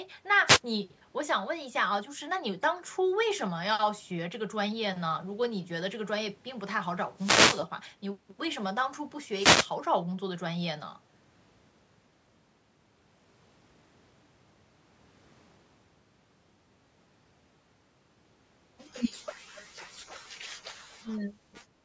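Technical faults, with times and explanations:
0.46 to 0.60 s, 7.16 to 7.66 s and 9.33 to 9.70 s: wireless microphone noise hits. Each is a short swish of static over the speech, the longest being the half-second burst near 7.2 s. The analogue FM radio link from the microphone faded as reflected signals cancelled the direct one. With the carrier weakened, receiver noise rose through the audio and briefly covered it before the signal recovered.
21.05 to 21.32 s: speech suppressed in double talk. The talker's level dips by roughly 10 dB for about a third of a second and then comes back. This is likely the echo canceller reacting to both sides talking at once. Unable to tell the near talker from the loudspeaker echo, it turned everything down, and the near voice was pulled down with the echo.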